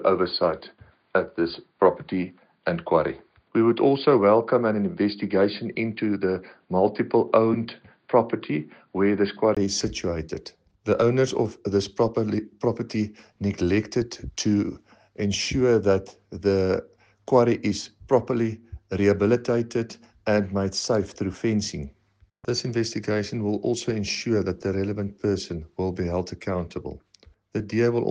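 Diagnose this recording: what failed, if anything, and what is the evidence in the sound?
The first 9.57 s sound dull and narrow, with nothing above 4.8 kHz. A faint new noise floor sits far below the signal, with no level jump. At 9.57 s a 20 ms gap leads to fuller sound. At the capture stage, this is likely an input switched to a poorer device.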